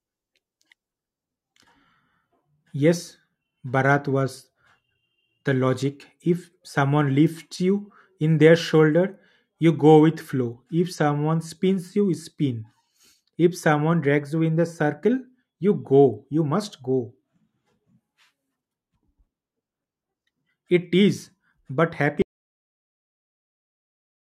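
At 22.22 s the speech cuts off abruptly and never returns. The last 2.2 s or so, right up to the end of the clip, is a dead audio dropout to silence, with not even room tone underneath. That's likely the input going away, whether a device unplugging, a link failing or something getting muted, while the recorder carried on writing nothing. Whatever was said in that stretch is simply gone.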